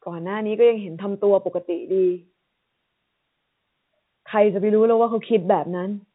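No faults can be heard anywhere in this speech clip. It has the narrow band of G.711 telephone coding, with nothing above about 3.8 kHz, and any coding trace is faint at most.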